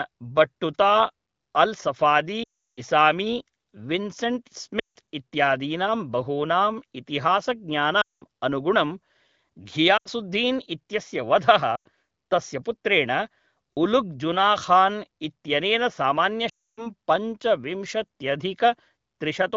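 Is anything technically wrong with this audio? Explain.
Yes. The call lost AMR speech frames six times: at 2.43 to 2.81 s (340 ms), 4.79 to 4.97 s (160 ms), 8.01 to 8.23 s (200 ms), 9.97 to 10.08 s (80 ms), 11.76 to 11.88 s (100 ms) and 16.49 to 16.87 s (280 ms). Radio errors corrupted frames, and the AMR-WB decoder filled each gap by repeating the last good pitch and vocal tract settings at falling gain. In each gap the speech drops to near silence within two frames. The speech then returns weak or rough for a moment. Outside these gaps, the wideband codec at 15.85 kbit/s leaves only light coding damage.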